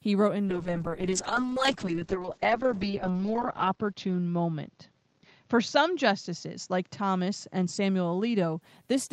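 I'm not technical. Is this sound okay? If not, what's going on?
No. A call bitrate drop runs from 0.47 to 8.67 s. The connection's available data fell sharply, so the speech was squeezed into far fewer bits. Detail above about 8 kHz is lost, leaving the voice muffled and rough, worst for nearly three seconds.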